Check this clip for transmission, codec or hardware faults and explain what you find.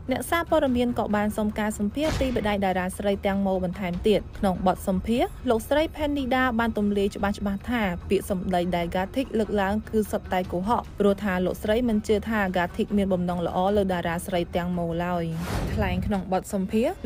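No transmission, codec or hardware faults.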